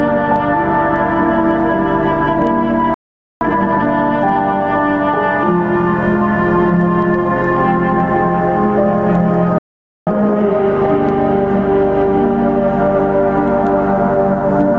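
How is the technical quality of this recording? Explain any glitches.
The recording has two repeated glitches. Each time, the audio drops out briefly and then rushes to catch up. Throughout, the sound stops at about 8 kHz, as expected from a wideband call codec such as Opus.

Playback stall: At 2.94 s the audio cuts to silence for about 0.47 s, until 3.41 s. It happens again from 9.58 s to 10.07 s, for about 0.49 s. The likely cause is the player running out of data or its thread being blocked. The output falls silent mid-flow.

Time-compressed catch-up: Right after each gap, from 3.41 s to 3.87 s and from 10.07 s to 10.55 s, the audio plays at twice normal speed. The player trims its backlog by cutting small pieces and cross-fading them together. The result sounds hurried at normal pitch.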